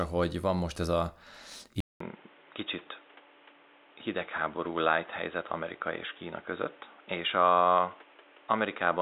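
A speech clip where, at about 1.80 s, the sound drops out for 200 ms and comes back dull and boxy, with nothing above 3.8 kHz, a new noise floor roughly 30 dB down and much the same level, most likely an input switched to a poorer device.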